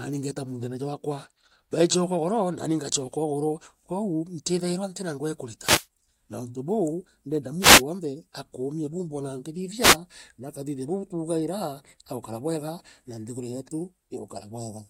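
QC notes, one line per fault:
5.60–5.87 s, 7.59–7.83 s, 9.81–9.97 s: wireless microphone noise hits. The FM radio link fades and receiver noise bursts through as a short swish of static, visible as broadband vertical smears on the spectrogram.
8.84–9.39 s: drift correction step. The speech slows about 5.3% and drops roughly 95 cents, nearly a semitone, likely from clock-matching software resetting playback rate. On the spectrogram, harmonics step down.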